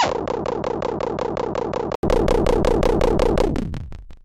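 Until 2.03 s nothing passes above 7.6 kHz, the level sits about 5 dB lower with its own low noise, and an 80 ms gap follows. This is likely an input switched to a poorer device, not plain filtering, because tone, level and noise all change together.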